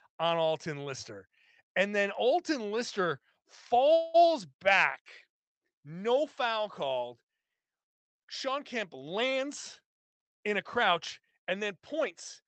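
At 3.93 s the speech stops moving forward for about 0.2 s, until 4.16 s. The last sound carries on as a short, fading buzz rather than dropping to silence. This is a call audio freeze. Delayed packets likely left the jitter buffer empty, so the receiver stretched what it already had. When the packets arrived, the speech resumed where it paused. Nothing is lost. A gap of about 207 ms has simply been inserted.

From 9.02 s to 12.01 s the speech runs slightly fast, at about 104% speed, with the pitch unchanged. This is a jitter buffer speed-up. The buffer held more audio than it aims for. To pull the delay back down, the receiver trimmed many tiny pitch-period slices in a row, around 150 ms in total. The speech passes through a call codec whose band ends near 8 kHz, which fits Opus.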